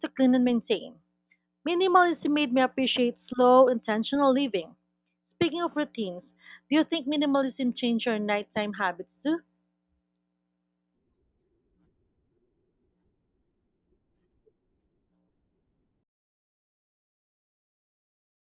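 No technical faults are audible.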